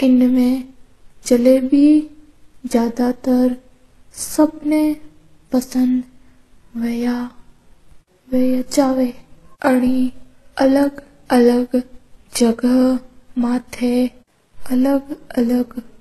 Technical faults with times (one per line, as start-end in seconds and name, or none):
0.00-16.00 transcoding between lossy codecs